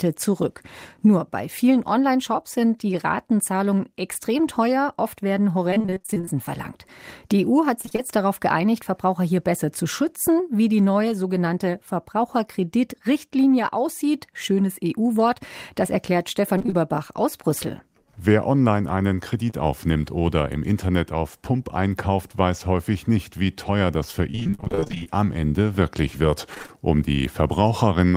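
At 4.13 to 4.17 s there is a short concealed packet loss. About 20 ms of audio never arrived in time. The decoder patched the hole by extending the preceding sound, then blended back. It leaves a brief smear in the speech.

From 5.71 to 6.29 s comes repeated packet loss, heard as robotic sound. Gaps keep recurring, each up to about 23 ms. Roughly half the span is patched, and the speech turns choppy with pieces missing. The same fault returns at 7.81 to 8.00 s and 16.58 to 16.74 s, each time for a fraction of a second.

At 19.50 to 19.54 s another short concealed packet loss fills about 20 ms. It is a quick wobble rather than a clear dropout.

The longest robotic stretch runs from 24.32 to 25.17 s. About 380 ms is missing there, and single gaps reach about 39 ms. A final brief burst follows at 26.55 to 26.70 s. Each patch repeats the last sound, and the next hole comes soon after. That gives these passages their choppy, broken texture.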